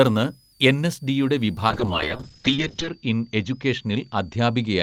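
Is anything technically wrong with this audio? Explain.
Yes. A switching power supply whistle runs throughout: a supply in audible burst mode or beating with another leaves a faint, roughly 5 kHz whistle, drifting between 4.5 and 5.1 kHz.

A call bitrate drop starts at 1.7 s and lasts to the end: the encoder was starved of bits, which fits a fall from about 32 to 7 kbps. Treble above 8 kHz vanishes and the speech turns rough and watery, worst for about 1.18 s.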